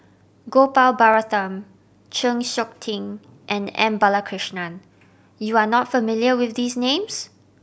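At 1.14 s and again at 4.26 s the speech carries a single sharp click, most likely from dropped samples: a couple of samples go missing, so the waveform jumps abruptly to a later value. Each shows as a thin vertical line across the spectrogram.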